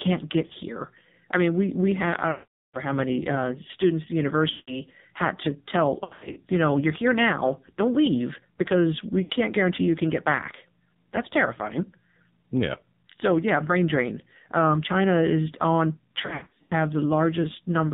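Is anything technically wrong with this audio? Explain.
Yes. The speech sounds buzzy and synthetic, with a boxed-in, muffled quality and nothing above 4 kHz. This is heavy damage from the AMR narrowband mobile codec. AMR-NB samples at 8 kHz and rebuilds the voice from a vocal tract model excited by a pitch predictor and a few pulses per 5 ms. The coarseness heard here fits one of its low modes, around 5.9 kbps, where few bits leave the voice sounding artificial.

There are also lost AMR speech frames at six points. At 2.32 to 2.78 s (420 ms lost), the sound stretches out and then fades to silence. At 4.50 to 4.80 s (180 ms), the sound is likewise smeared and fading. The shorter losses at 0.46 to 0.54 s (40 ms) and 9.24 to 9.32 s (60 ms) give brief dips or warbles. At 6.04 to 6.39 s (220 ms lost, scattered over 320 ms) and 16.22 to 16.73 s (320 ms lost, scattered over 480 ms), the losses come in runs of no more than 80 ms, so the audio stutters with repeated dips and warbles. 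In each case, frames corrupted in transmission failed their checksum. The decoder then reused the last good pitch and vocal tract settings at falling gain, so the speech returns weak or rough for a moment afterward.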